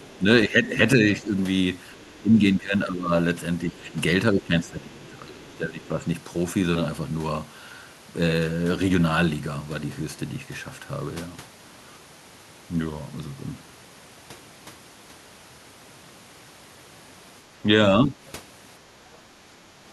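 An echo canceller that likely failed to remove all of the far-end loudspeaker signal lets the other side's voice leak through as faint scraps at 0.00–0.18 s and 1.92–2.12 s, about 30 dB below the speech, and briefly at 3.80–3.86 s, about 35 dB down. Speech suppressed in double talk follows, likely because the canceller could not tell the talker from the echo and turned both down. The voice dips by about 10 dB in pieces across 0.18–1.34 s and by about 15 dB across 2.21–3.12 s and 3.65–6.00 s, with the longest stretch of broken, muffled speech in the last of these. A final dip of about 10 dB comes at 17.64–18.21 s.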